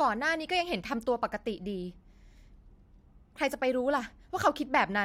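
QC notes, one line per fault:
No faults heard; nothing to log.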